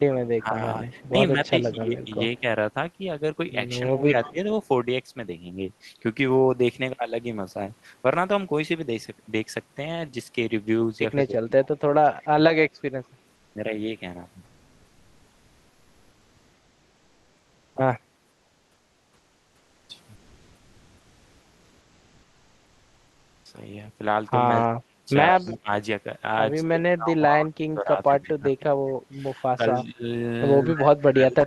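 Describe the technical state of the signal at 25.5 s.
At 25.5 s the speech is pushed far down, dipping by as much as roughly 25 dB and breaking up, within a stretch running from 24.66 s to the end. This is likely speech suppressed in double talk: with both sides talking, the echo canceller turned down the talker along with the loudspeaker echo.

From 25.37 to 25.53 s, a faint copy of the speech also trails 178 ms behind, about 30 dB below it. That is likely an echo leak, where the other side's canceller let part of its loudspeaker pickup return into the call.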